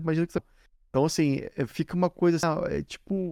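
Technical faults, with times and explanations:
0.38 s and 2.43 s: damaged data in a compressed stream. Corrupted bytes make the decoder misread a frame and resynchronise, giving a brief chirp, squawk, click or short hole.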